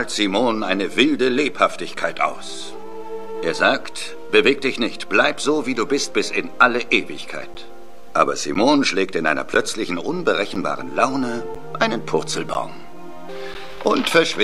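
From 7.54 s to 13.55 s, periodic USB or driver dropouts blank roughly 10 ms of signal once per second, giving about seven regular ticks, seen as thin silent notches and vertical spectrogram stripes.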